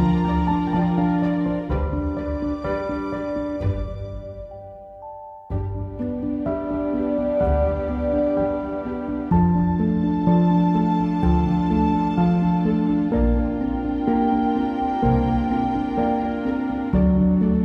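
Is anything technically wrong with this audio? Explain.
No, nothing technically wrong turns up anywhere in this audio.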